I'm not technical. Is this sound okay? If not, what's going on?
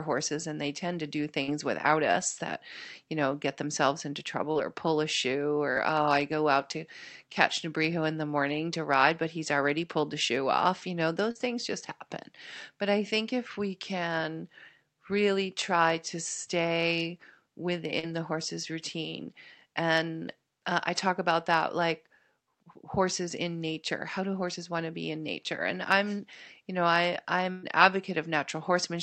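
No. There are small dropouts in the call. Five are short concealed packet loss, at 1.43 s (after "they tend to do"), 4.51 s, 5.71 s (before "oh i go out"), 11.31 s (after "shoe off you know") and 17.99 s. Each time about 40 ms of speech never arrived. The receiver patched the hole by stretching the last sound, so you hear a brief smear or wobble.

At 27.51 to 27.66 s there is a burst of packet loss. About 120 ms went missing in a row. The receiver held and faded the last sound to cover the gap. That part of the speech is gone, and the voice picks up a little further on.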